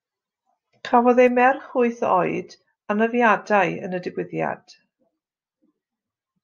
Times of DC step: none

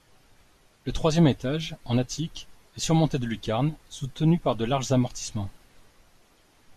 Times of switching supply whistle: none

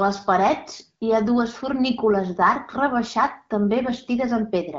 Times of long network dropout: none

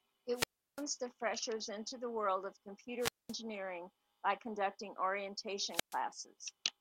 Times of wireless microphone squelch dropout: 0.33-0.84, 2.99-3.35, 5.69-6.00

